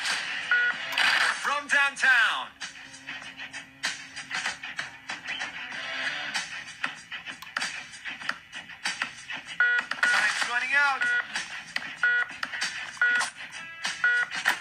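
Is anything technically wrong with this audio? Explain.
Yes, one short glitch. From 13.29 to 13.35 s there's a one-channel dropout: the sound abruptly dips by about 6 dB, likely because one stereo side briefly vanished before the mono sum.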